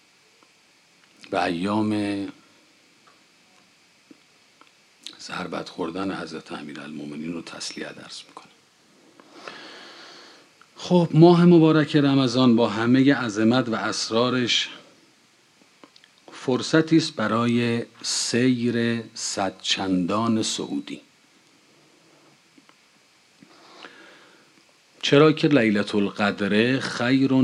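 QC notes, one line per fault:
No faults heard anywhere in the clip.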